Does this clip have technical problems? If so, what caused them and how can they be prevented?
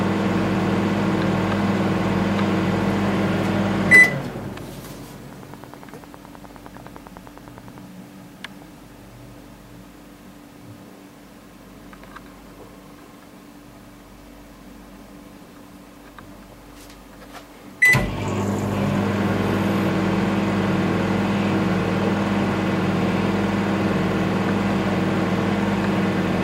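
Yes. A train of clicks runs from 5.33 to 7.79 s. About thirty near-identical ticks arrive at a steady rate of about 9.8 per second. They peak roughly 5 dB above the surrounding sound. Their even spacing and matching shape point to a repeating electrical pulse. The likely cause is interference from nearby equipment or a faulty connection or power supply. To prevent it, move or power down nearby devices, use shielded cables, and check the interface connection.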